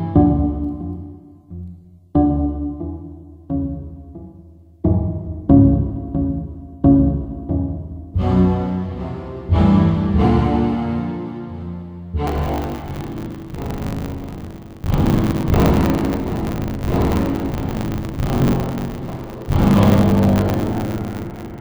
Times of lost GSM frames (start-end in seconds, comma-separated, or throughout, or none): none